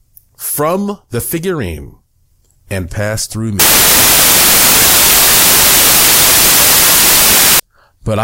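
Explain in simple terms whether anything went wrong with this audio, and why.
Right after "and pass through", from 3.6 to 7.6 s, the speech becomes loud, harsh noise. These are samples built from the wrong bytes: each sample's pieces were joined together wrongly.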